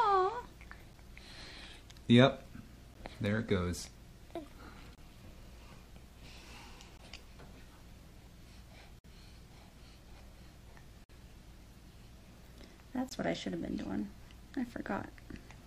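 You'll hear gaps between stream segments, hard-edged silent holes at 0.93, 2.94, 4.95–4.98, 6.97, 8.99–9.04, 11.04–11.10 and 13.09–13.11 s, spaced about 2 s apart. Each sits at a segment join where the timestamps don't quite meet, so the player pads the hole with silence. They range from about 10 to 55 ms long.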